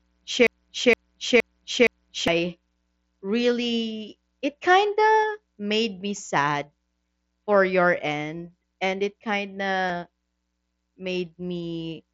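From 0.47 to 2.28 s, the speech falls into a broken-record loop. A piece about 467 ms long plays four times, back to back, with no change. The stream likely stalled and kept resending the last fragment it held. The audio that belonged in those 1.8 seconds is gone. It sounds like a skipping disc, the same snippet stuttering until normal playback resumes.

At 5.22 s, just before "made me sad", there is concealed Bluetooth headset packet loss. About 15 ms of audio went missing between headset and phone, which fits two lost frames. The receiver filled the gap by continuing the waveform from what came just before. The patch is short. The same thing happens at 9.88 s, again about 15 ms, equally brief. Outside these patches, the wideband headset link passes the speech with light grain on louder sounds.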